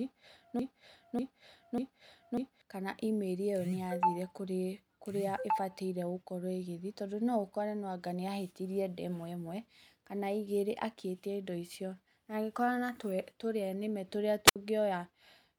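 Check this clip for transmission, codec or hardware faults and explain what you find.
Two faults are audible: a repeating loop at the start and a brief radio dropout near the end.

From 0.00 s to 2.62 s, already under way when the clip begins, a broken-record loop repeats a 0.59 s fragment three times back to back. The most likely cause is a stalled player or stream resending its last buffer. On a spectrogram, identical blocks tile side by side.

At 14.46 s to 14.56 s comes a wireless microphone squelch dropout. As the FM signal faded, hiss rose briefly before the receiver's squelch muted the output for about 66 ms. The waveform shows a near-flat gap, with a noise smear just before it.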